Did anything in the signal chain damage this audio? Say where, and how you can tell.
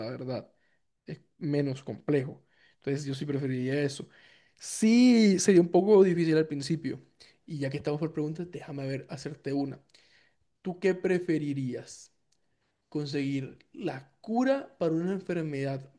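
No, nothing along the way seems to have damaged this speech recording, and I can't point to any stage that left a mark on it.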